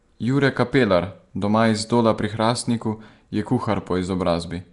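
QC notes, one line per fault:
Throughout: Nellymoser compression. Plainly audible rough, hissy, smeared sound, nothing above 10.6 kHz. Likely the Flash codec noise-filling starved bands, fitting 44 kbps.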